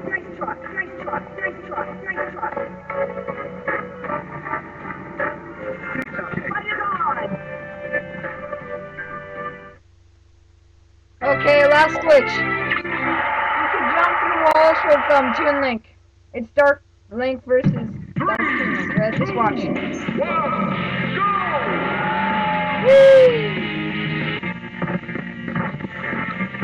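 At 6.02 to 6.07 s, 14.51 to 14.56 s and 18.35 to 18.40 s there is damaged data in a compressed stream. Each event lasts about 44 ms. Part of the encoded data at these points is wrong. The decoder misreads or drops the affected frames and loses sync. It then searches for the next valid frame header before normal decoding resumes. Each event sounds like a brief chirp, squawk, click or short hole breaking through the sound.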